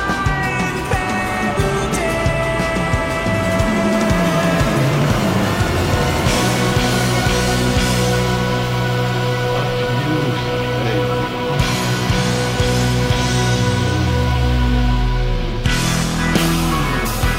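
No technical faults are audible.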